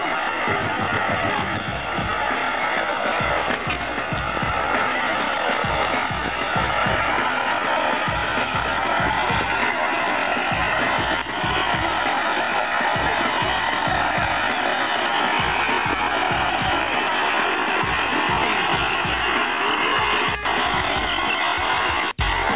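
Nothing goes wrong here; there's no technical fault to point to anywhere in the sound.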